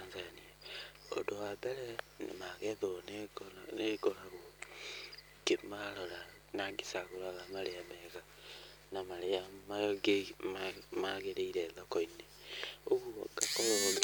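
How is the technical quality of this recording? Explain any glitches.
The recording carries a mains buzz from start to finish, sitting roughly 25 dB below the speech. Sharp switching spikes, twice per 50 Hz cycle, leak into the signal and spread harmonics into the kilohertz range. That produces a steady, raspy edge rather than the smooth low drone of plain hum.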